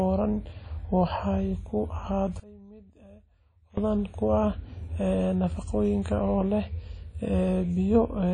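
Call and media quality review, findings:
Whole clip: ringing, washy speech. Hiss rises and falls with the signal. Nothing above 10.1 kHz. Probable component: encoder, likely WMA compression. A transform codec with long blocks smears quantisation noise across tens of milliseconds. Weak spectral lines are zeroed. Damage plainly audible. Consistent with a low bitrate, around 32 kbps.

2.40 s to 3.77 s: speech level collapses by about 24 dB. Only a faint residue remains. Probable component: stereo path, one channel inverted. Polarity is reversed on one side, likely. The centred content cancels in the mono sum. Only the small inter-channel difference survives. Full level returns at 3.77 s.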